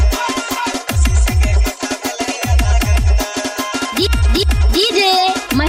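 Throughout the clip, channel delay (comb filtering) gives the sound a hollow, phasey quality. One channel runs around 3 ms behind the other, and when the two are summed to mono, their shared content cancels at evenly spaced frequencies, starting near 150 Hz and repeating up the spectrum. These notches stay fixed rather than sweeping, which separates this from flanging, and the thinning is comb-shaped rather than the broad bass loss of polarity inversion.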